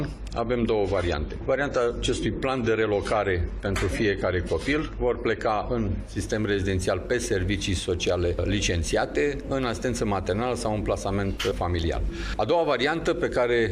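From 0.0 to 6.0 s the audio shows an adaptive stream starting at a low bitrate, consistent with roughly 32 kbit/s AAC. Treble is thin and smeared, with nothing above 13.8 kHz on a spectrogram. At 6.0 s the bandwidth widens abruptly, gaplessly, to a quality suggesting 96 kbit/s.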